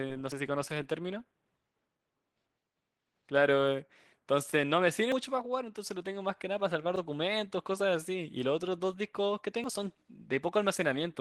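Opus voice compression runs throughout this speech recording: the voice sounds hoarse and slightly robotic, which fits a low bitrate near 16 kbps with the upper band coded thinly. Dropped buffers (overruns) cause forward jumps at 5.12 s (roughly a tenth of a second lost), 6.96 s (a brief skip) and 9.64 s (a somewhat longer gap), likely from audio being overwritten before it was read.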